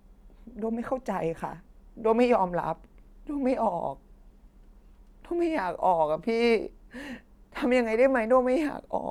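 Nothing technically wrong can be heard in this recording of speech.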